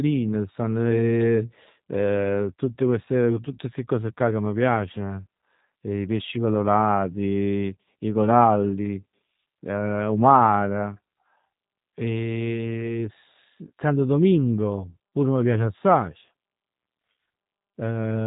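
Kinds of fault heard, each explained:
G.729 codec: The speech was encoded with a low-rate VoIP codec that rebuilds each short frame from a vocal tract filter, a pitch predictor and a few pulses, which fits an 8 kbit/s stream. Nothing above about 3.8 kHz survives, and the voice sounds plainly rough and synthetic throughout.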